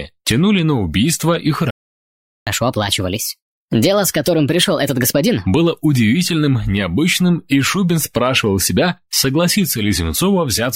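At 1.70 s the sound cuts out in mid-flow and stays silent for about 0.76 s, until 2.47 s. This is a playback stall, likely caused by the player running short of data or its thread being blocked. Unlike a dropout that skips material, the sound resumes where it stopped.

From 2.47 s to 5.47 s comes catch-up at higher speed. The player drains its backlog by resampling at 1.25 times normal speed, so tempo and pitch rise together, roughly four semitones sharp. A pitch-preserving time-stretch would speed it up without this pitch rise.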